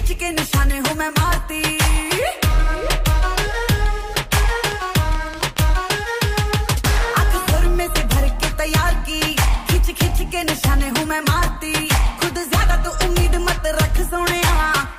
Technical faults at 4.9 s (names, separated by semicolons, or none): train of clicks